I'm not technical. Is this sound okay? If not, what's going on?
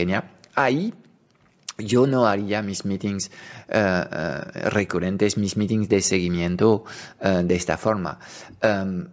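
Yes, nothing stood out on listening, and the missing deepest bass is just the normal effect of the call's microphone processing.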